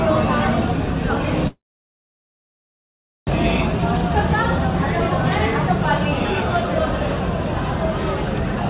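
A call audio freeze runs from 1.47 to 3.29 s, likely caused by packets being held up in transit until the jitter buffer ran dry. The receiver briefly stretches the last sound into a fading buzz or hiss, then about 1.7 s of silence follows. When the audio resumes it picks up exactly where it stopped, with nothing lost, so everything afterwards lands about 1.8 s late. Throughout, nothing is heard above 4 kHz, which fits G.711 mu-law at 64 kbps.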